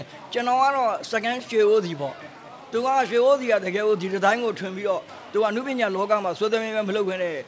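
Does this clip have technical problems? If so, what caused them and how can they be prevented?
No, there are no technical faults to report here.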